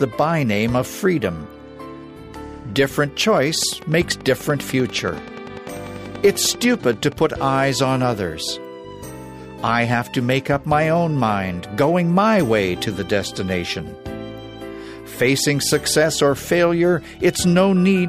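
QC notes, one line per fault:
3.63–7.13 s, train of clicks: a regular ticking at about 10.3 clicks per second, around forty in all, each pulse nearly identical in shape and peaking roughly 5 dB above the surrounding sound, so it stays audible through quiet gaps as well. On the waveform it shows as evenly spaced narrow spikes. On a spectrogram it appears as a comb of thin vertical broadband lines. The steady repetition points to likely interference from nearby equipment or a faulty connection or power supply.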